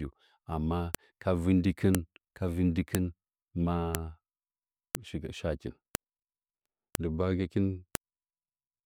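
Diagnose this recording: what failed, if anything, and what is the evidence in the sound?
The failure is in storage or streaming: one-second WAV pieces were joined with their headers left in, so each file header is played as audio. Those header bytes come out as sharp clicks in the speech at 0.95, 1.95, 2.95, 3.95, 4.95, 5.95, 6.95 and 7.95 s.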